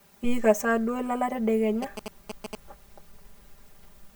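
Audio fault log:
throughout: channel delay (comb filtering). One channel runs roughly 5 ms behind the other, and summing them to mono cancels the shared content at regularly spaced frequencies starting near 100 Hz, carving fixed notches that leave the speech hollow and phasey.
1.82–2.55 s: GSM signalling bursts. A nearby 2G phone sends short groups of radio bursts while signalling, and the audio circuit rectifies them. The result is a galloping dit-dit-dit of short 217 Hz buzzes, roughly 10 dB below the speech.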